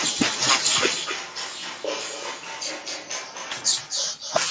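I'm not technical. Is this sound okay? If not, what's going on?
No. On the far end of the call, the speech is played through a loudspeaker and picked up again by the microphone, with no canceller to remove it. This is an echo with no canceller: throughout the clip, every word returns about a third of a second later as a fainter, thinner copy.

From about 0.96 to 3.52 seconds, the recording likely switched to a distant microphone, perhaps because the close one dropped out. The voice suddenly turns hollow and echoey, loses its fullness, gets noticeably quieter and has more background noise, then snaps back.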